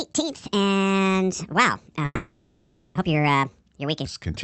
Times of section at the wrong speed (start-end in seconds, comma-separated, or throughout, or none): 0.00-4.05